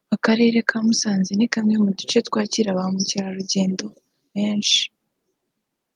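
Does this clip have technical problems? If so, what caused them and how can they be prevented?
No, the speech signal shows no technical faults, so there is nothing here that needs a cause or a prevention step.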